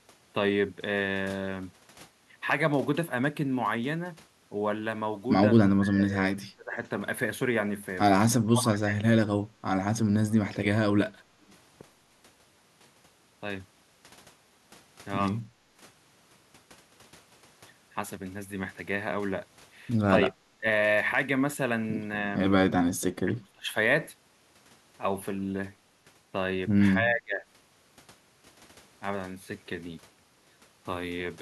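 Speech suppressed in double talk occurs at 5.58 to 6.36 s, 6.53 to 6.8 s, 8.3 to 9.08 s, 20.23 to 20.65 s, 23.25 to 23.75 s and 27.0 to 27.45 s. In each, the talker's level sinks abruptly, by roughly 15 to 35 dB at worst, for a few hundred milliseconds, deepest around 8.3 s, then recovers. The likely cause is an echo canceller that, with both ends talking, could not tell this talker from the loudspeaker echo and pulled everything down. Background gated by the echo canceller appears at 15.43 to 15.56 s. The room tone drops by about 13 dB for around 150 ms while the far end plays through the loudspeaker, because the canceller clamps the microphone hard, and the ambience returns once it releases.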